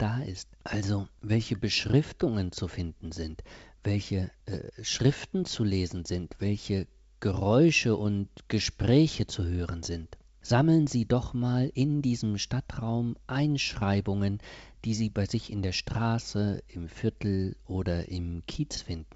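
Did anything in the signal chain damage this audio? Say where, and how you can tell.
No, nothing in the signal chain damaged this audio.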